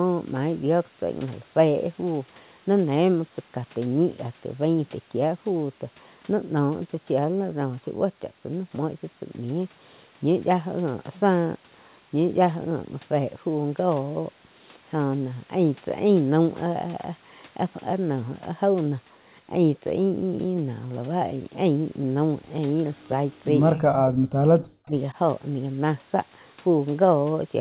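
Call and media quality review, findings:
Echo leak, 22.95 to 23.08 s: faint delayed copy of the far side, about 40 dB under the speech, lagging roughly 244 ms. Likely the far end's echo canceller letting a bit of loudspeaker pickup through. Brief scrap rather than a sustained tail, and it's narrowband like the rest of the G.711 path, nothing above 4 kHz.

Speech suppressed in double talk, 23.73 to 24.47 s: talker ducks hard, deepest drop roughly 40 dB, most of that stretch affected. Likely the canceller mistaking near speech for echo while both sides talk, and clamping everything.

Same thing again at 24.84 to 24.95 s: shorter dip, roughly 25 dB, about a tenth of a second. Also likely the canceller's double-talk handling.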